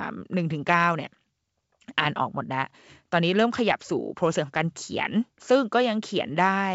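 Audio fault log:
No faults heard in this G.722 wideband telephone speech.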